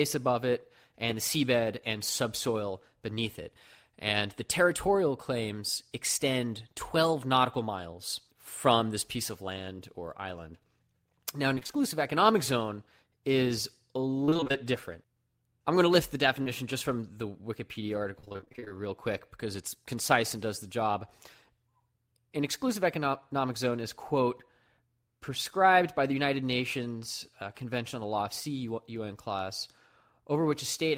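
Choppy stretches break up the speech from 11.55 to 11.82 s, just before "economic zone is a", from 14.25 to 14.65 s, right after "economic zone is a", and from 18.20 to 18.72 s, ahead of "real quick because it's". This is repeated packet loss (robotic sound). Holes of roughly 20 to 30 ms kept recurring, and each was patched by extending the preceding sound, so about half of every stretch is synthetic fill.

Between 16.44 and 16.48 s, a brief smear or wobble shows short concealed packet loss. About 20 ms of audio failed to arrive in time, and the receiver filled the hole by continuing the last sound before blending back into the real signal.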